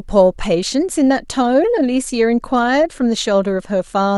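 Nothing is technically wrong with this speech clip.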